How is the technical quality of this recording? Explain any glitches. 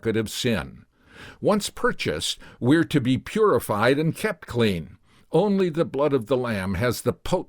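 Two brief clicks mar this speech clip, at 3.94 s just before "and kept clean" and at 5.60 s before "the blood of the", likely dropped samples: a fraction of a millisecond missing, so the waveform jumps and snaps sharply.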